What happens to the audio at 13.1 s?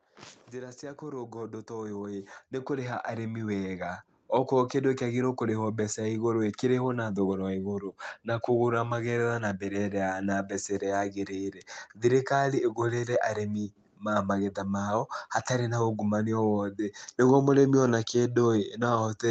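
Nothing goes wrong at 13.1 s: the speech runs on intact through that moment, carried as normal over the call path with its band limit of about 8 kHz.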